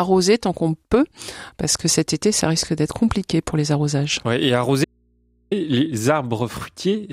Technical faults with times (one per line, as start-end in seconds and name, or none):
4.84-5.51 audio dropout to a faint residue